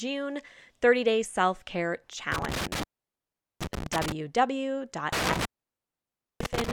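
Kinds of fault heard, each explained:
Intermittent contact: a loose plug or cable briefly opening, so the speech cuts out with crackle, once for about 0.77 s around 2.3 s and again for about 0.95 s from 5.1 s.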